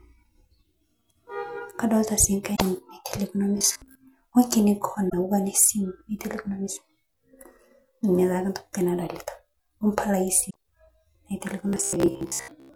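Damaged data in a compressed stream hits this speech recording three times, at 2.52 to 2.62 s, 5.06 to 5.14 s and 10.46 to 10.56 s. Each time the decoder meets corrupted frames, loses sync and hunts for the next valid header, so the sound gives a brief chirp or squawk lasting under a tenth of a second. The second kind of fault, robotic sound from repeated short buffers, is likely caused by audio arriving too late, so that playback fills the gaps by replaying the last chunk while fresh audio is skipped. It occurs from 3.58 to 3.95 s and again from 11.69 to 12.75 s. About half of what is heard there is repetition, and the repeats impose a rigid metallic buzz at 66.7 Hz, which fits a buffer about 15 ms long. The buzz still loosely tracks the speech underneath.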